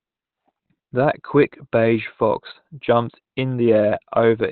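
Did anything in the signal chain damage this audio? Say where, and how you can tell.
Yes, at the codec: Opus compression, likely in its low-bitrate speech mode, leaves the speech muffled and hoarse throughout, and a spectrogram is blank above 4.3 kHz.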